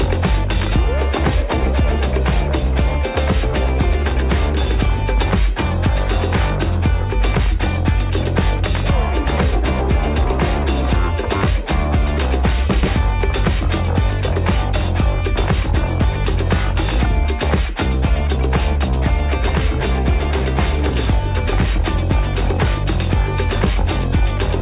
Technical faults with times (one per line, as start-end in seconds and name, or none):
none